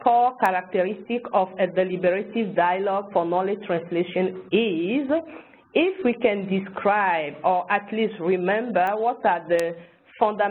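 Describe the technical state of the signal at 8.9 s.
At 8.87 s there's a bit error spike, a single sharp tick. A flipped bit knocked three consecutive samples off by a power of two before they snapped back, peaking at about -21 dBFS. It's broadband and has nothing to do with the surrounding sound.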